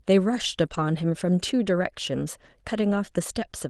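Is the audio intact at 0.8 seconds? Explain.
No. From 0.65 to 0.79 s the sound turns rough and noisy: a lost packet rebuilt from error correction, with the decoder playing lower-bitrate Opus copies carried in the following packets.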